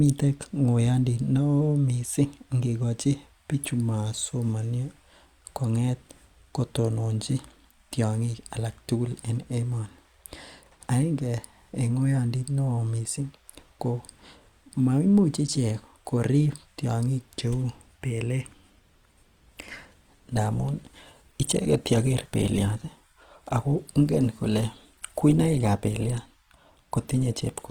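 At 18.60 s the adaptive stream switches to a lower bitrate and stays there until the end of the speech. The connection evidently slowed, so the player moved to a leaner encoding without any gap. The step down is abrupt, and codec artefacts thicken. This fits a fall from roughly 64 kbit/s Opus to about 16 kbit/s.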